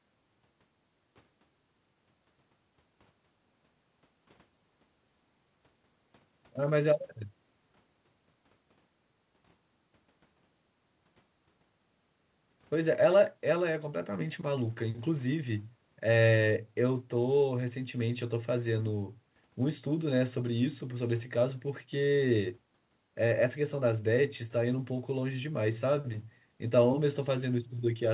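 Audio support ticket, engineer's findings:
Went over the speech here and found nothing to flag, just the call path doing its normal narrowband thing, with G.711 at 64 kbps leaving nothing above 4 kHz.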